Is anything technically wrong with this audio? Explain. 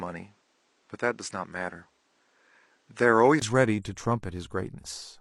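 Yes. Until 3.42 s, the input was likely switched to a poorer device. It passes nothing above 9.5 kHz and adds its own background noise roughly 45 dB below the speech, so the opening sounds dull. A 20 ms gap marks the switch back, where the speech brightens at much the same level.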